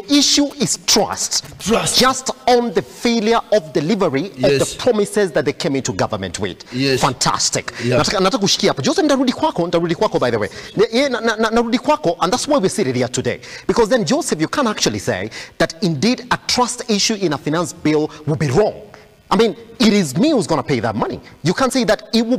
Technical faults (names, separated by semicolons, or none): GSM signalling bursts; GSM phone buzz